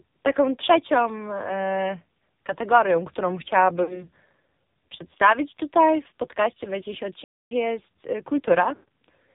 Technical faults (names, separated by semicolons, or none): AMR narrowband mobile codec; lost AMR speech frames; playback stall